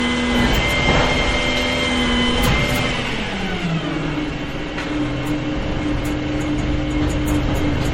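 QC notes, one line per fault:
Throughout, generation loss: swirly, hollow smear with blurred attacks and nothing above 16.5 kHz, likely from around seven MP3 re-encodes near 64 kbit/s compounding noise.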